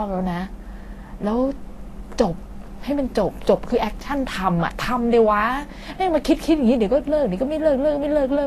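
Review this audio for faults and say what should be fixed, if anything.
Vorbis compression damage runs through the whole speech clip. Nothing remains above 14.2 kHz, and the treble below that turns hissy and grainy, with blurred consonant attacks. Unlike a simple low-pass filter, the detail is replaced by noise, likely from Vorbis encoding at a low bitrate around 35 kbps. Encoding at a higher Vorbis quality setting would prevent this.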